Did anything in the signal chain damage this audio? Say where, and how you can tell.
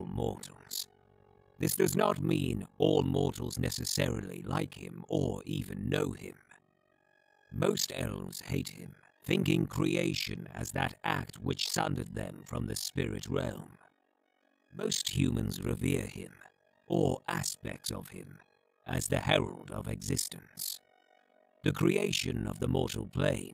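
Yes: a deep, rough flutter around 50 Hz runs the whole way through. This is overlap-add ripple from frame-based processing whose overlapped windows don't sum evenly, swinging the level about 60 dB each frame.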